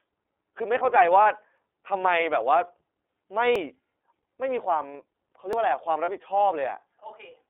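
Speech squeezed through the iLBC codec the whole way, so it's band-limited to roughly 300 to 3500 Hz and sounds plainly rough and synthetic, which fits iLBC's 30 ms, 13.33 kbps mode. There are lost iLBC frames at 1.23 to 1.26 s and 6.04 to 6.09 s, each a single 30 ms gap filled with a short buzzy held-vowel sound before the voice snaps straight back. Audio is missing between chunks at 3.56 s and 5.53 s, where a tiny slice vanishes and the two sides butt together. The two-second spacing points to a recorder likely dropping samples at each buffer handover.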